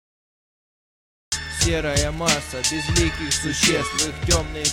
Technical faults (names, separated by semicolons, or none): cut-off start